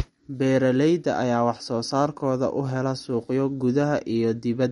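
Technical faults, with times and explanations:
Throughout, MP3 compression: The speech has nothing above 11.2 kHz, so the top of the treble is missing. The damage is plainly audible, with a watery, swirling texture. The likely cause is an encoder short of bits, which fits a low bitrate of about 48 kbps. To save bits it cuts everything above a fixed frequency. It also drops weaker frequency lines, which flicker on and off from frame to frame and cause the swirl.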